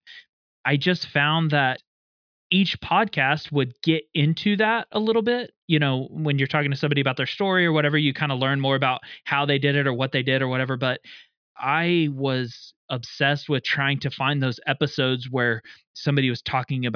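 A speech recording with nothing technically wrong to point out, so there are no faults here to time or trace back to a cause.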